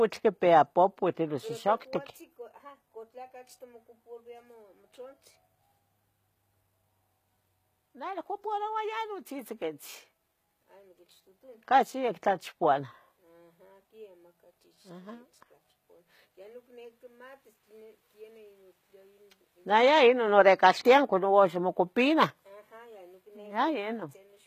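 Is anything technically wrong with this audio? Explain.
Yes, there's a codec problem running through the whole clip of speech. Nothing comes through above 14.9 kHz, and the top end sounds bright but synthetic: s sounds come out gritty, a bit metallic and lispy. That's likely HE-AAC compression at a low bitrate, something in the region of 20 kbps. Only the lower band is really coded, and the treble is patched in by copying lower bands upward, so its harmonics don't line up with the real ones.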